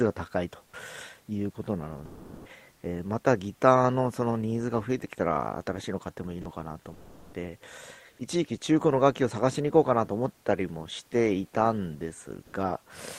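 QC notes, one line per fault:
0.65–0.73 s, 2.05–2.49 s, 6.41–6.45 s and 6.93–7.33 s, sound dropped by the voice detector: the sender's detector likely mistook part of the sound for background and stopped transmitting, so stretches of 80, 440, 40 and 400 ms give way to steady, featureless noise until it triggers again.
12.43–12.53 s, comfort noise in place of the background: the sender likely paused transmission (discontinuous transmission), so for 100 ms the real room noise, about 40 dB below the speech, is swapped for flat synthetic noise whose level jumps by about 8 dB.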